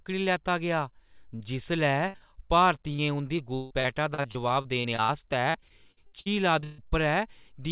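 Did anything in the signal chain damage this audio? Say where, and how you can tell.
Yes, and it all happened on the network. Short concealed packet loss shows up as brief smears at 1.36–1.42, 2.18–2.22 and 2.92–3.00 s. Each gap is about 20–40 ms, patched by extending the last sound.

There's a burst of packet loss at 2.08–2.16 s. About 60 ms went missing, and the concealment holds and fades the last sound before the audio jumps ahead.

Repeated packet loss gives that choppy, robotic sound over 3.36–5.10 s (12 gaps, up to 156 ms) and 5.50–6.80 s (8 gaps, up to 142 ms). Concealment covers roughly a quarter to a third of each stretch.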